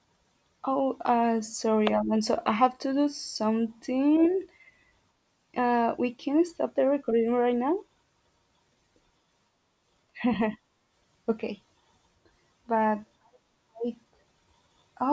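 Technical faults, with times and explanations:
No technical faults are audible in this speech.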